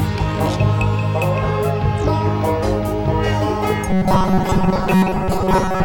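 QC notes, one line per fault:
3.90–5.85 s, robotic sound from repeated short buffers: a rigid metallic buzz at 188 Hz, likely from a roughly 5 ms slice looped while new audio arrived too late, replacing most of it. Unlike hum, it follows the music's shape only roughly; unlike stutter, each repeat is too brief to hear.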